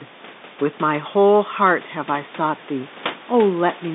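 Nothing stood out on listening to this speech, which carries room noise about 16 dB below it and the narrow band of a telephone line.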